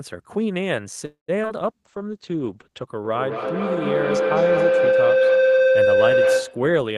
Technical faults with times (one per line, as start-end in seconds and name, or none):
1.05-1.30 call audio freeze
1.42-1.50 short concealed packet loss
1.64-2.93 call bitrate drop
3.05-6.81 feedback howl